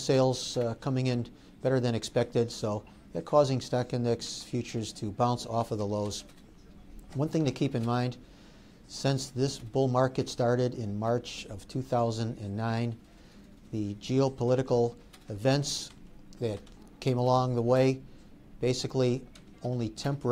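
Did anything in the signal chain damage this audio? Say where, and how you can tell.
No, nothing in the signal chain audibly damaged this audio, and the signal carries no dropouts, distortion, glitches or other processing faults at any point.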